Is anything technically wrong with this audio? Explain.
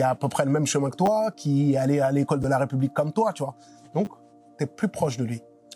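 Yes, there are repeated buffers at 1.06–1.08 s, 2.43 s and 4.05–4.07 s. New audio arrived late, so a piece that fits a 10 ms buffer replayed, twice, once, then twice, producing brief buzzy clicks.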